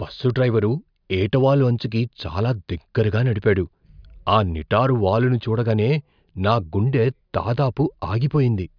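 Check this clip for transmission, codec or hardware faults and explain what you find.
The speech signal holds steady and continuous throughout, with nothing audible that points to a problem in how it was carried, encoded or captured.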